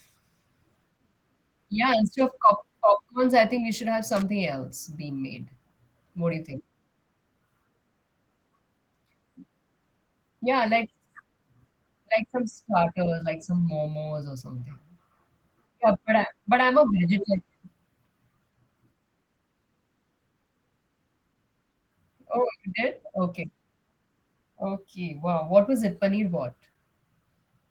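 Opus voice compression runs through the whole speech clip. The damage is plainly audible. The sound fits Opus in hybrid mode at about 16 kbps. SILK codes the lower band and a CELT layer adds the top. Coarse coding leaves the voice hoarse and slightly robotic.

A loose connector crackle comes at 4.17 to 4.22 s, after "think we should have" and before "else being made". A worn contact briefly made and broke the signal path. The audio is chopped into a short, irregular burst of scratchy crackle.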